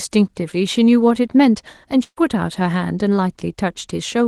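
From 2.03 to 2.18 s, a burst of packet loss removes about 140 ms of speech. The receiver extends the last sound for about 130 ms, fading it, then leaves about 40 ms of silence before speech resumes further on. A spectrogram shows smeared, flattening bands that thin out. The waveform shows a decaying repeated envelope and an abrupt restart. Throughout, the call codec leaves the spectrogram empty above 12 kHz.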